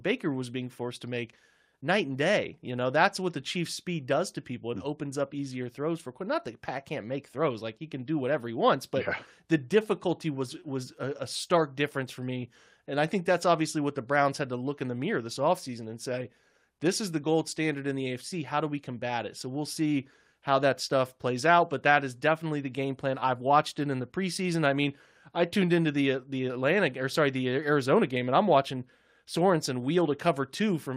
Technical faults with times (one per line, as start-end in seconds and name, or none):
none